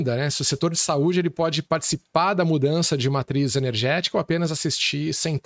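Nothing stood out on listening to this speech, which carries the usual trimmed low bass of call microphone processing and nothing above 8 kHz.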